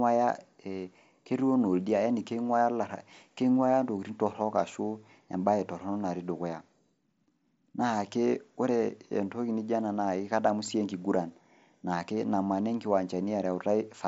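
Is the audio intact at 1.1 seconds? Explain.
Yes, at 1.1 seconds the speech comes through intact, carried over a Bluetooth mSBC headset link with nothing more than that codec's own light wideband character.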